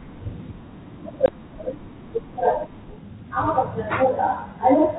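Speech over a 32 kbit/s G.726 ADPCM link, which sounds light and band-limited below 4 kHz. At 1.26 to 1.29 s there's packet loss on the ADPCM call, a hard 20 ms hole, about one packet's worth. The decoder's predictor then briefly lags the sender's, so the speech returns slightly distorted before settling.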